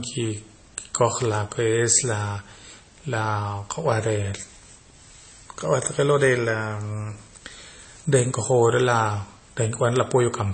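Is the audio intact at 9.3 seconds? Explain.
No. At 9.3 s, as throughout the clip, the speech is dull, with nothing above about 8.3 kHz, and it carries layered smeary, warbling artefacts. That points to transcoding between lossy codecs, likely low-bitrate MP3 re-encoded to AAC, each pass adding its own damage.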